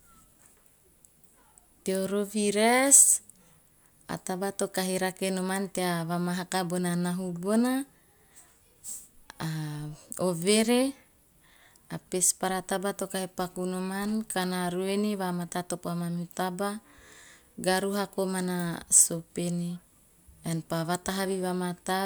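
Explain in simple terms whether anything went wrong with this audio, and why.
A wireless microphone noise hit at 2.85 to 2.93 s: the radio signal briefly faded, letting a short swish of static through.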